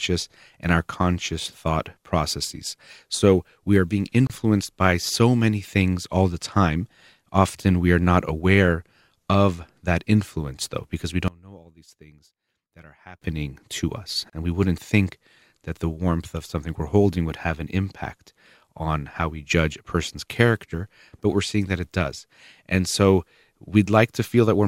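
A gap at a join of encoded pieces opens at 4.27 to 4.30 s, a hole of about 28 ms cut into continuous speech with smeared edges, after which the sound resumes exactly where it broke off. The clip was evidently encoded in separate pieces and stitched together untrimmed, so each piece's leading encoder delay and padded final frame survive as silence at the seam.

From 11.28 to 13.22 s the speech drops by about 24 dB, leaving only a faint residue. The likely cause is one channel inverted: with one stereo side in reversed polarity, the centred voice common to both channels cancels when they are summed to mono, and only their small differences remain.

A second gap at a join appears at 14.30 to 14.33 s, about 31 ms long, exactly 10 s after the first, matching regularly spaced encoded pieces.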